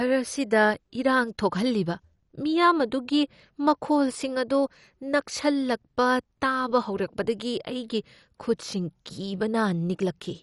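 Throughout the speech, the likely cause is MP2 compression with too few bits to share among its 32 sub-bands, so the encoder switches off the upper bands entirely and quantises the rest coarsely. Nothing remains above 11.3 kHz, which dulls the top end, and the surviving bands flicker in and out, leaving a gurgling, granular roughness on the speech that is plainly audible and fits a low bitrate of around 48 kbps.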